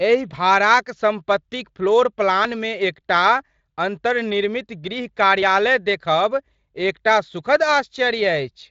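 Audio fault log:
5.42 s, audio missing between chunks: just after "अन्तर्निर्मित गृह" about 20 ms vanishes and the two sides join with no silence, likely lost at a boundary between 3-second processing blocks. Unlike a dropout, nothing goes quiet; the sound simply skips ahead.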